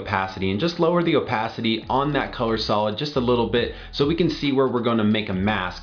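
No technical faults can be heard anywhere in the audio; the signal stays steady and intact throughout, with no interruptions, distortion or level problems.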